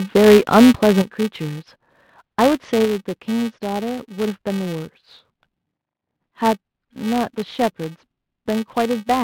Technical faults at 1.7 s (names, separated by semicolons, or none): filter restarted on every block